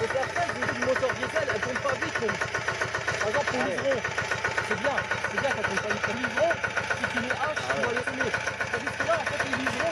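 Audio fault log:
0.67, 2.29 to 2.31, 3.64, 6.13 and 8.02 to 8.04 s, compressed frames skipped: the audio jumps ahead by roughly 0.1 to 0.3 s each time, with the biggest jump at 6.13 s, as whole frames go missing.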